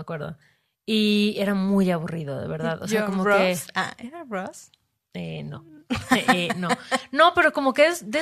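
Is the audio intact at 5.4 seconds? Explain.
Yes, at 5.4 seconds the speech runs on cleanly, with no dropout, click, distortion or other fault to be heard.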